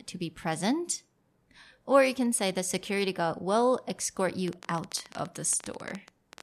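A train of clicks runs from 4.48 s to 6.41 s in this speech recording, near the end. Around thirty sharp, similar-shaped pulses arrive at an uneven pace, averaging about 15 per second, and they stand roughly 10 dB above the surrounding audio, so they read as a rapid popping laid over the sound and heard through any pauses too. The likely cause is electrical interference from nearby equipment or a faulty connection or power supply injecting repeated impulses.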